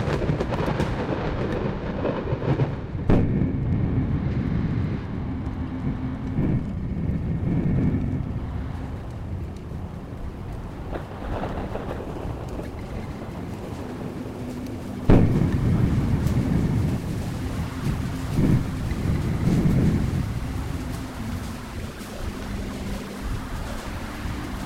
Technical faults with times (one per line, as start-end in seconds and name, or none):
0.00-24.66 periodic clock jitter